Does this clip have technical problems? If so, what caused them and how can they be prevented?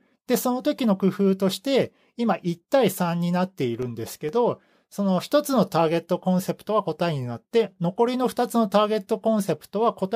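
Yes. CD scratch ticks, 3.59 to 4.29 s: four tiny clicks, the longest about 1.5 ms, where a disc scratch defeated error correction once per rotation. They appear as thin, evenly spaced vertical lines on a spectrogram. Cleaning or resurfacing the disc, or re-ripping it with a secure ripper that retries damaged sectors, would prevent them.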